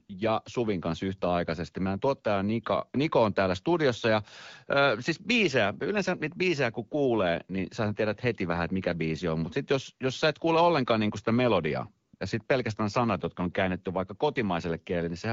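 AMR comfort noise replaces the real background at 0.07 to 0.09 s, and twice after "ollenkaan niin sitä melodiaa": at 12.07 to 12.13 s and 12.15 to 12.19 s. Speech frames stopped, so the receiver synthesised smooth, steady noise. Unlike a dropout, these pauses hold a flat hiss rather than silence.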